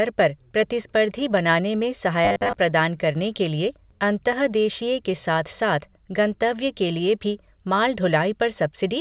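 It's a speech recording, and between 2.25 and 2.55 s, right after "पर प्रतिस्पर्धी बनाने में" and before "प्रदान करने के", the voice turns into a rigid metallic robotic sound with a steady 100 Hz buzz. That's likely from repeated short buffers: audio arrived too slowly, so about 10 ms chunks got replayed, covering most of that stretch while the real audio was dropped. The call path comes through as telephone-band sound with nothing above 4 kHz, which fits G.711 mu-law at 64 kbps.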